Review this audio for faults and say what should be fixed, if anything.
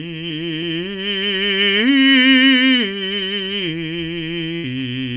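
A burst of packet loss hits the music at 4.56 to 4.66 s. Several packets in a row arrived too late or not at all, and the receiver covered about 75 ms by extending the last sound and fading it down, giving a brief held, decaying tone. About 80 ms of the music is then missing when playback resumes further on. The narrow band, with nothing above 4 kHz, fits a G.711 A-law call path. Prevent this by adding forward error correction or redundancy on the network link, or by allowing a deeper jitter buffer so late packets are still played.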